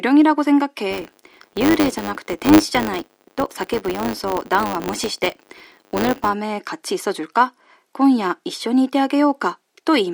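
From 0.91 s to 6.35 s the speech carries a filter restarted on every block: a processing filter loses its memory at each block boundary and starts again from silence, so every block opens with a small transient. These arrive as a 100 Hz buzz, which points to blocks of about 10 ms. Unlike mains hum, the buzz rises and falls with the speech level and vanishes when the signal drops away.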